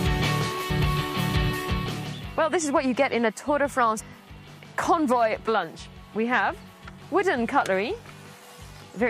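Audio with compressed frames skipped: at 0.69–0.71 s, 3.99 s and 5.47 s the sound jumps ahead by roughly a tenth, a fifth and three tenths of a second, as whole frames go missing or are rejected by the decoder. Unlike a dropout, no silent gap appears.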